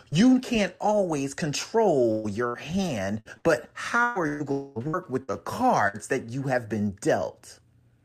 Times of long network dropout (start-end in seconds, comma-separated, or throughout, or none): 4.52-4.78